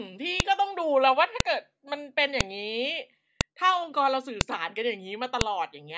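Sharp, loud clicks land at 0.40, 1.40, 2.41, 3.41, 4.41 and 5.41 s, roughly one per second, and they cut through the speech no matter what's going on underneath. That's a file header played as audio: the speech was stitched together from one-second WAV pieces, and each piece's header bytes got left in and played back as samples. Those few bytes turn into a brief, hard snap right at every join.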